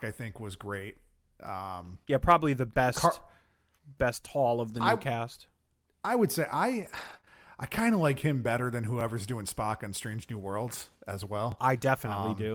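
From 0.79 to 7.29 s, starting after "I think was" and ending before "I kind of like", the speech has scattered short gaps. About three packets went missing or arrived late, totalling 60 ms. The receiver hid each hole by extending the preceding sound, smoothing over 380 ms. The longest hole is only around 20 ms, so each one is a brief tick or smear. They fall at irregular points, which separates them from the evenly spaced joins described next.

Overlapping chunks cause a tiny stutter at 1.47, 3.98, 6.50, 9.01 s (just after "like him better than") and 11.52 s (just after "as well"). The audio was handled in 2.5-second blocks, and each new block began 12 ms before the previous one finished, so that sliver plays twice. The strict 2.5-second spacing and identical size of each repeat show this is a chunking fault and not random packet loss.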